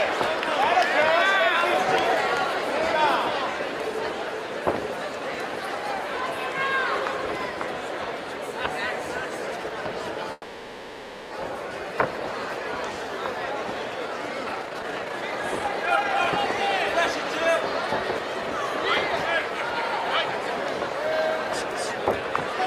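At 10.32 s the sound stops moving forward and a fading buzz or hiss carries the last sound for about 1 s. It ends in a brief silence of 20 ms. At 11.33 s it resumes where it left off. This is a call audio freeze, likely from delayed packets emptying the jitter buffer.

From 14.43 s to 22.51 s comes a jitter buffer speed-up. The receiver trims tiny pitch-period slices again and again. Playback runs at 112% with pitch unchanged. About a second of audio is removed, and the passage sounds hurried.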